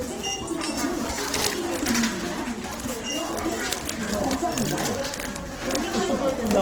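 Throughout, tones turn noisy, rough and grainy. This is likely Opus compression at a low bitrate, with starved bands filled by folding or noise.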